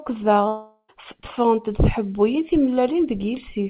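A long network dropout is the likely cause of the break from 0.48 to 0.90 s. About 0.4 s of speech never arrives, and the receiver stretches the last sound it had into a fading buzz that covers most of the gap before a short stretch of silence, around 70 ms. Speech then resumes with the lost portion simply gone. Throughout, the audio carries the narrowband character of the call codec, with nothing above 4 kHz, which fits 64 kbps G.711 mu-law.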